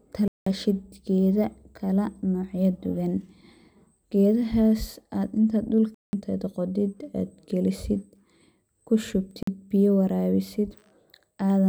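At 0.28 s, just before "geda kala", a block of digital silence drops out for about 0.19 s. Another identical gap hits at 5.94 s, both fitting an 8192-sample buffer left unfilled. A shorter 46 ms hole at 9.43 s suggests a 2048-sample block.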